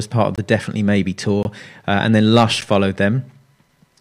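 At 0.36–0.38 s after "part of", 1.43–1.45 s before "uh and then", and 2.61 s, a block of digital silence cuts in: 21, 21 and 11 ms of silence, fitting unfilled 1024- and 512-sample buffers. Each appears as a flat waveform line and a blank spectrogram strip with abrupt edges.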